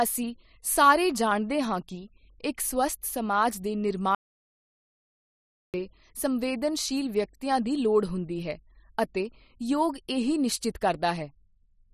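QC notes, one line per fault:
4.15–5.74 s: audio dropout to silence. The speech cuts off mid-flow and 1.59 s is lost to silence with no room tone, unlike a natural pause, likely from lost input.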